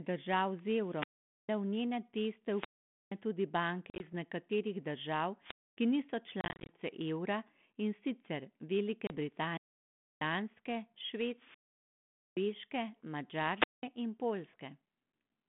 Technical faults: wireless microphone squelch dropout; packet loss on an ADPCM call

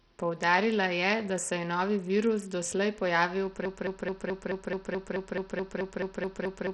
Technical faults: Bluetooth SBC compression; broken-record loop

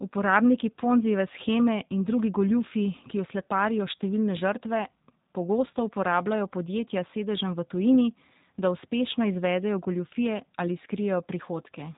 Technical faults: G.729 codec

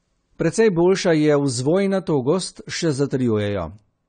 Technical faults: AAC compression

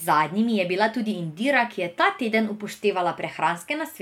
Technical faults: none

